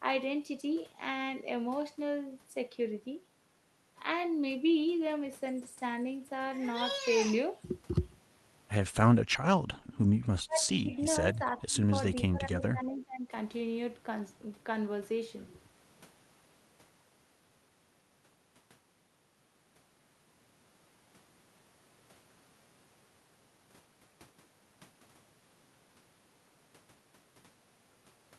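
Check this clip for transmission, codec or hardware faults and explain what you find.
Two echo-canceller faults appear close together, around 10 to 13 seconds.

From 9.8 to 9.95 s, the background is gated by the echo canceller. It pulls the microphone down about 8 dB while the far end plays, so the room tone briefly dips.

From 10.46 to 11.91 s and from 12.12 to 13.32 s, the speech fades and breaks up. This is likely speech suppressed in double talk. The canceller mistakes the talker for echo and cuts the level, by roughly 20 dB and then roughly 15 dB, for about a second each time.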